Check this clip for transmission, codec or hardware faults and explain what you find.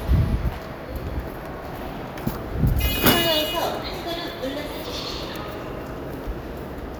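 No faults can be heard in this recording of sounds. There is nothing in it that calls for further explanation.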